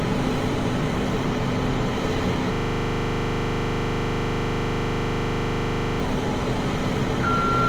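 Opus compression runs throughout the recording: the everyday sounds turn grainy, rough and noise-filled rather than swirly, as the likely cause, an Opus encoder in CELT music mode, rebuilds starved bands with folded or noise-like content. The damage is plain, fitting roughly 24 kbps, though the bandwidth still extends to about 20.1 kHz.

A system hang loop runs from 2.54 to 6.0 s: the driver or computer stalled while the sound hardware kept replaying one 40 ms slice of its ring buffer, about 86 times. The exact repetition at 25 Hz sounds like a steady buzz.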